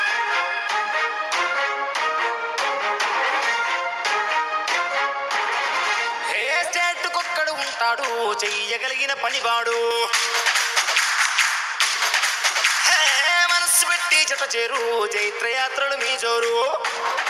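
From 9.91 to 14.28 s, pre-emphasis is left on: the treble boost applied for recording or transmission is never undone by the matching de-emphasis, so the high end stays lifted by about 11 dB at 10 kHz relative to 1 kHz, a tilt that fits the J.17 curve. The sound turns thin, bright and sibilant. On a spectrogram, energy above a few kHz brightens abruptly for that span, and the waveform looks spikier.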